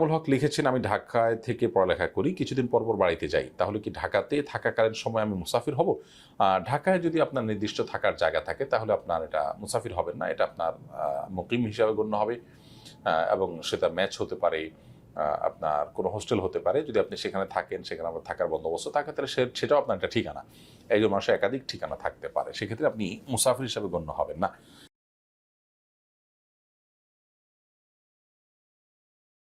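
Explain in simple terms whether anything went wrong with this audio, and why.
Nothing went wrong here: the signal stays technically sound all the way through, with no point where it breaks down or gets damaged.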